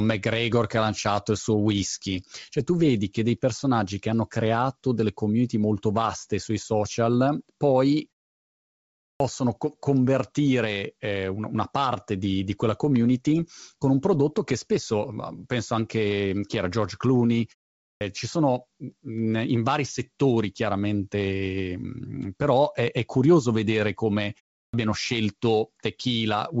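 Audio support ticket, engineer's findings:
Clipped start after a pause at 9.14, 17.94 (onset of "ci sono mh") and 24.67 s (after "è curioso vedere come"). Roughly 60 to 70 ms of onset is swallowed after pauses of 0.35 to 1.1 s. The output device is probably waking or relocking. Sound itself is lost, not just background.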